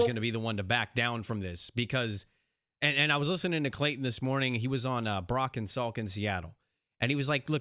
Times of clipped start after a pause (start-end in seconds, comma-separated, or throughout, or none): none